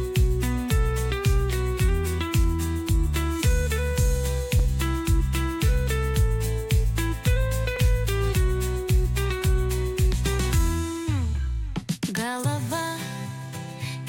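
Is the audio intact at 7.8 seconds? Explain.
No. At 7.76 s there is a block of digital silence about 3 ms long. The audio drops straight to zero and comes back with no fade. Either the output buffer was not filled in time, or a calculation produced invalid values that were replaced by zeros. The block is far shorter than about 15 ms, so it is not heard as a pause. It comes across as a brief tick or dip in the sound.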